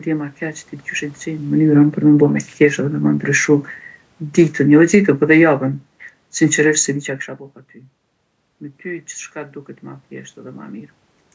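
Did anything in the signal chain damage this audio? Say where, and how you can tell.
Yes. From 1.54 to 6.98 s, speech and room noise sink together by about 9 dB: automatic gain falling in call processing, reacting to input that was too loud or to background noise too strong for its starting gain.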